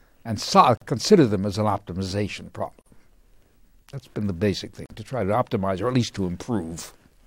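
Short silences cut into the sound at 0.77, 2.82 and 4.86 s. Each lasts about 42 to 43 ms and recurs every 2.0 s. This is a gap at a join of encoded pieces: leftover encoder delay and end padding were never trimmed. The edges are smeared.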